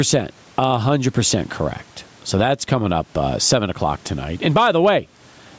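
Gain pumping throughout: the level swings about 15 dB, likely from excess gain into a fast limiter, so the waveform looks flattened.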